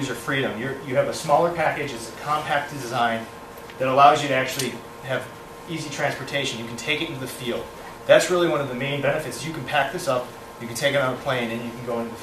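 No technical faults can be heard anywhere in the audio.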